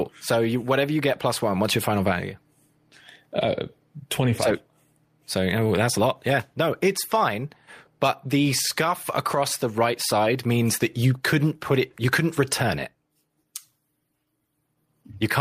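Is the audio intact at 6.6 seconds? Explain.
Yes, the speech at 6.6 seconds plays through cleanly, with no dropout, click, distortion or other fault at that moment.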